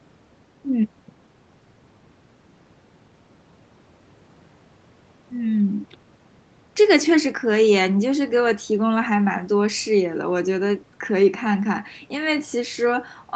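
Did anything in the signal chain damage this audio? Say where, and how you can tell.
No, nothing in the chain damaged this speech: the top end stops at about 8 kHz, which is just what the call's microphone processing and its Opus link are set up to pass, so that's the call path working as intended.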